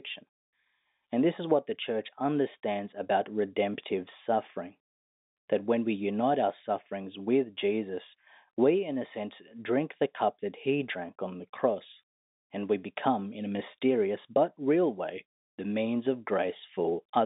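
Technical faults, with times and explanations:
Nothing stood out on listening to this speech, which comes over the G.711 telephone coding path with its usual 200 Hz to 3.7 kHz line band.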